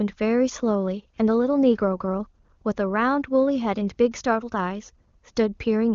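No technical faults are audible in the speech, which passes through an AMR wideband (HD Voice) codec whose clarity points to its highest mode, around 23.85 kbit/s, with the band ending at 7.1 kHz and the coding leaving at most a faint trace.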